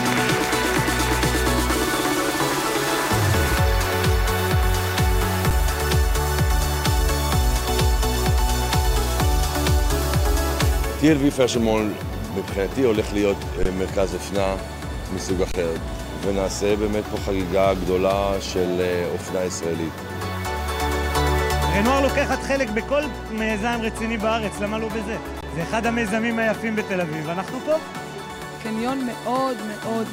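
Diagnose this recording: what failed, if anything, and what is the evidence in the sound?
Underrun with held sample at 5.50 s, 13.63–13.65 s, 15.52–15.54 s and 25.41 s: the output buffer ran dry, and the converter held its last value flat for 7 to 23 ms. Around 7 to 20 ms of live audio was lost.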